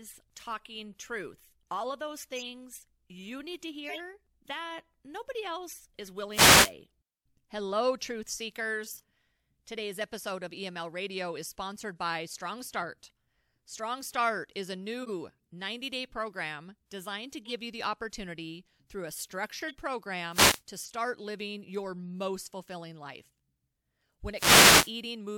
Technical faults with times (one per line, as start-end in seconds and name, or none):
2.36-2.45 corrupt frame decoded
3.85-4.00 corrupt frame decoded
6.30-6.73 wireless microphone noise hit
8.79-9.03 compressed frames skipped
15.02-15.10 corrupt frame decoded
17.45-17.51 corrupt frame decoded
19.68-19.75 corrupt frame decoded
20.30-20.62 wireless microphone noise hit
20.79-20.92 corrupt frame decoded
24.32-24.94 wireless microphone noise hit